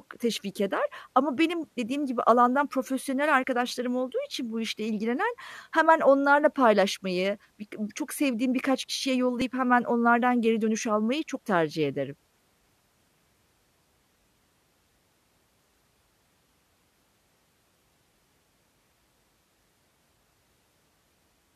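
The stream is split into 2-second segments whose timestamps overlap, an overlap between stream segments, so the player trims a few milliseconds of speech that was never actually duplicated. Each trim removes about 5 to 6 ms and makes the waveform jump, heard as a small click or skip at 3.44 s after "dediğim gibi alandan profesyonel", at 7.44 s after "onlarla paylaşmayı", and at 9.42 s after "çok sevdiğim birkaç kişiye".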